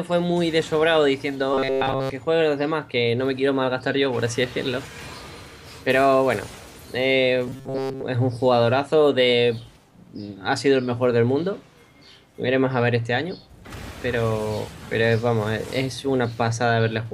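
A rigid metallic buzz near 134 Hz replaces the sound from 1.54 to 2.10 s entirely and mostly from 7.48 to 8.04 s: robotic sound from repeated short buffers, likely from about 7.5 ms of audio looping while real audio is skipped.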